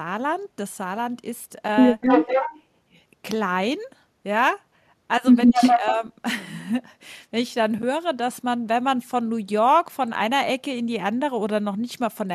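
Echo leak affects this speech clip from 2.01 to 2.6 s and again from 5.54 to 5.79 s: a copy of the voice returns 249 ms late, only a few dB below the direct speech, most likely because a far-end echo canceller let its loudspeaker pickup slip through. Speech suppressed in double talk overlaps the second leak, running from 5.49 to 6.03 s, where both sides talk at once and the voice dips by around 5 dB in pieces totalling under half a second, likely the canceller turning down the talker along with the echo it could not separate.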